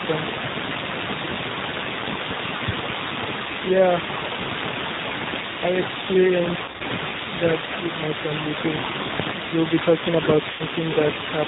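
A speech recording carried throughout by the G.729 codec at 8 kbit/s, with plainly audible damage. Nothing above 4 kHz survives, and the voice has the rough, slightly synthetic texture of a pulse-driven model rather than the smeared, watery sound of a transform codec. Between 2.68 and 2.93 s, two sharp pops about 15 dB louder than the speech land on top of it while the talking continues underneath. They are likely voltage spikes from a plug, switch or static discharge, and their abrupt, click-like onset separates them from codec artefacts. VoIP packet loss concealed by the speech codec appears at 6.64 to 6.83 s, where 120 ms is missing across a 160 ms stretch in bursts of no more than 40 ms, which fits about six 20 ms packets. It appears again at 10.51 to 10.63 s, where 80 ms is missing, consistent with about four packets. Instead of silence or a hard dropout, the decoder fills each gap with a buzzy, fading extension of the last sound, and the voice stays weak for a moment after packets resume.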